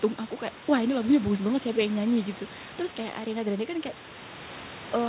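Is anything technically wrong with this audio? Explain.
No, nothing in this speech recording stood out as a technical problem on listening.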